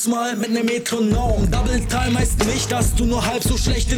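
At 1.53 s, 2.59 s and 3.45 s the audio jumps forward, skipping roughly 10 ms, then about 30 ms, then about 10 ms. This is likely a dropped buffer (overrun): samples were overwritten before being read, and the surviving edges were spliced together. Unlike a dropout, no silent gap appears; the sound lurches ahead mid-flow.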